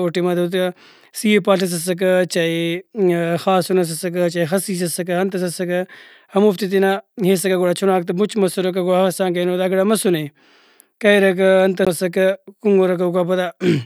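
At 11.85 s the player's laser jumped off its track to another turn of the disc's spiral, a CD skip. Output mutes for a very short moment, around 15 ms, heard as a tick, and the speech resumes from a different point.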